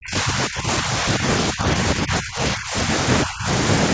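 The speech dips and breaks up from 0 to 1.23 s, at 1.51 to 1.66 s, from 1.82 to 2.9 s and at 3.25 to 3.48 s, sinking by as much as about 25 dB. This is likely speech suppressed in double talk, with the echo canceller turning this talker down while the far side spoke.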